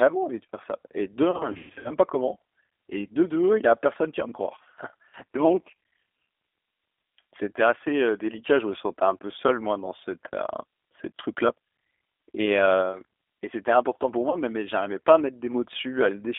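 The speech is carried through a G.729 codec at 8 kbit/s, which rebuilds it from a vocal-tract filter and a few pulses per frame within a line band of about 300 Hz to 3.5 kHz, so it sounds muffled, rough and plainly synthetic. VoIP packet loss concealed by the speech codec hits twice. From 1.31 to 1.92 s, just before "pas comment", about 300 ms of gaps are scattered over 540 ms, the longest lasting 120 ms, and the decoder's stretched, fading fill-in smears the sound. At 14.30 to 14.38 s, between "et c'était important pour" and "mais mais j'arrivais pas", a single gap of about 30 ms brings a brief blur.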